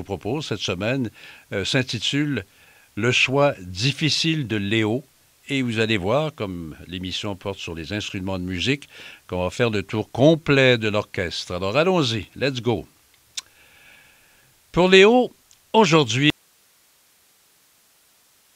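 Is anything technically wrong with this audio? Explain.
Yes. An audio dropout to a faint residue starts at 16.30 s and lasts to the end. The speech cuts off abruptly, leaving only hiss about 40 dB down, likely because the source signal was lost while the path after it stayed live. The waveform shrinks to a thin flat band, and the spectrogram shows only even broadband noise.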